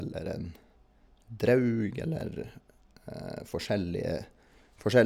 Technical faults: clock drift buffer slips

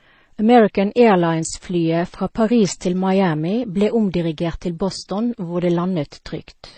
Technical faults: transcoding between lossy codecs

